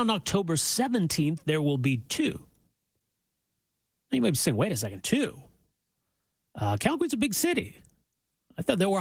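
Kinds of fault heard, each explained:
No kind of fault is heard in this speech clip.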